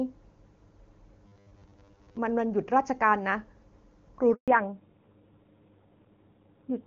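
From 1.26 to 2.18 s the speech takes on a robotic sound from repeated short buffers, a rigid 100 Hz buzz that likely comes from 10 ms chunks being replayed. About half the audio is repeated rather than new, which shows on a spectrogram as evenly spaced horizontal harmonics. At 4.34 s a handover gap of 140 ms appears as a flat silent stretch in the waveform, where no frames arrived while the link switched. From 4.48 s to the end there is a fallback to narrowband. Everything above 4 kHz disappears, leaving a sharp ceiling on the spectrogram and a duller, rougher voice. The sound points to a drop from AMR-WB at around 23.85 kbit/s to AMR-NB at around 7.4 kbit/s.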